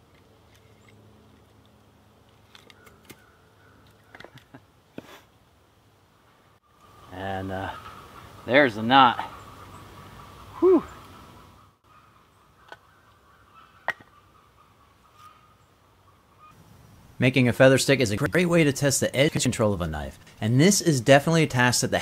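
Four short jumbled moments at 7.77–7.94 s, 9.47–9.64 s, 18.18–18.35 s and 19.29–19.46 s are chunks out of order: an 85 ms block of audio arrives one slot late and swaps places with its neighbour, leaving three hard joins each time.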